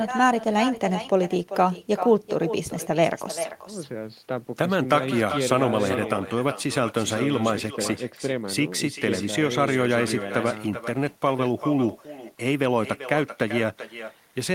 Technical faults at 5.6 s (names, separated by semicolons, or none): echo with no canceller